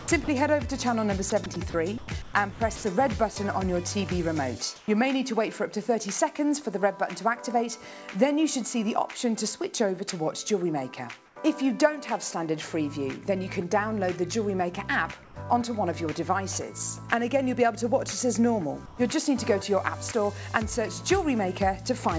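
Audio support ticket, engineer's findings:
Sound chopped by the voice detector, 0.00–0.28 s and 1.30–2.84 s: repeated holes filled with comfort noise, 119 ms lost in the first stretch and 480 ms in the second. Likely sender-side VAD toggling between sending and muting across quiet parts of the sound.

Sound dropped by the voice detector, 3.34 s: a 20 ms gap of steady comfort noise in place of the sound, 10 ms of it lost. Likely the sender's VAD classed quiet material as background and paused transmission until it retriggered.

Comfort noise in place of the background, at 4.76–4.88, 11.26–11.36, 15.24–15.36 and 18.86–18.98 s: the real background, about 23–33 dB below the loud parts, is swapped for smoother synthetic noise that is quieter by about 1, 3, 5 and 2 dB respectively. Likely DTX pauses with receiver-generated comfort noise. Band-limited to 8 kHz throughout, which fits a G.722 call path at 64 kbps.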